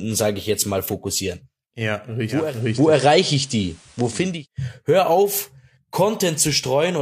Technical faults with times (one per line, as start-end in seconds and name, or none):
2.24-4.47 digital radio blending to analogue